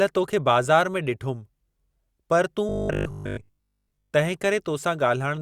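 From 2.69 to 4.13 s, just after "पर तूं", robotic sound from repeated short buffers appears. A rigid 50 Hz buzz, with about 70% of the audio repeated, follows the speech only roughly, likely from one 20 ms buffer repeating.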